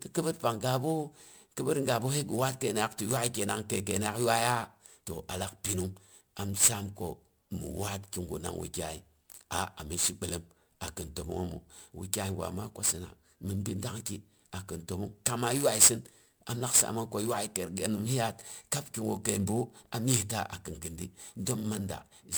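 Generation loss runs from start to finish. The speech sounds swirly, smeared and hollow, more than a single MP3 pass at 128 kbit/s would explain, and consonant attacks lose their edge. The likely cause is repeated decoding and re-encoding, around seven times. Each pass quantised on a shifted frame grid, so noise and spectral gaps compounded. Content still reaches up to about 20.1 kHz, so the damage lies in the texture, not in a lowered bandwidth.

Sample clock jitter also covers the whole clip. The converter's timing wanders by around 7 microseconds, so each sample is taken slightly early or late. The error depends on how steeply the waveform is moving, and it sits roughly 10 dB below the signal. It comes through as a grainy hiss bound to the speech. It grows on loud and sibilant moments and drops away in the pauses, where the waveform barely moves.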